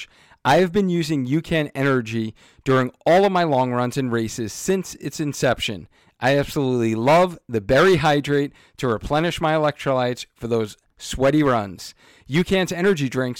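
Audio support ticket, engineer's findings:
Hard clipping throughout: a gain stage or converter driven about 7 dB past full scale, around 3% of samples flattened, giving crackle on speech peaks.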